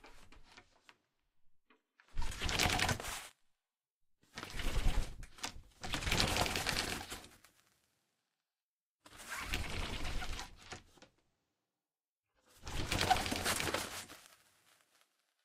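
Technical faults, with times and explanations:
3.29 to 3.31 s, skip ahead. Playback jumps forward with no gap filled. Roughly a second of audio is missing. Later audio was already waiting, so that stretch was dropped, on the way or by an overflowing jitter buffer. The two sides join almost directly.
3.44 to 4.11 s, jitter buffer speed-up. The audio runs at 104% speed with unchanged pitch. The buffer held more than its target, so the receiver cut many short pieces in a row, removing around 40 ms in total to bring the delay down.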